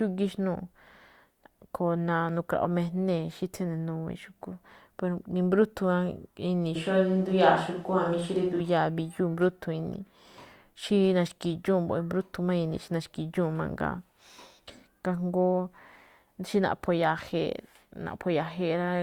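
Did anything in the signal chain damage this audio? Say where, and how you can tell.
Yes. Capture stage: from 6.76 to 8.60 s the speech turns abruptly roomy and thin in the bass at similar level, likely a switch to a distant microphone. The spectrogram shows smeared reverberant tails and weaker low frequencies.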